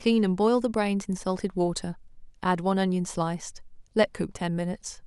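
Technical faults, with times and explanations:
No technical faults are audible anywhere in the speech.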